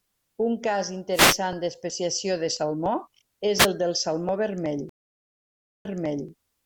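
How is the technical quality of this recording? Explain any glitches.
The recording has three glitches: two bursts of static and one dropout with a repeat.

From 1.13 to 1.38 s, and again briefly from 3.58 to 3.67 s, a swish of static washes over the speech, just before "d'especiació de salmó" and then before "el del". These are wireless microphone noise hits. The analogue FM radio link faded as reflected signals cancelled each other. The receiver's own noise rose and came through as a burst of static over the speech.

At 4.89 s the sound cuts out for about 0.96 s of silence. When it returns, the speech picks up about 0.44 s earlier than where it stopped, so a short stretch is heard twice. This is a stream reconnect. The connection dropped, the player went quiet, then rejoined. A freshly started decoder took up a resent burst of audio from slightly before the break, and its first frame came in softly.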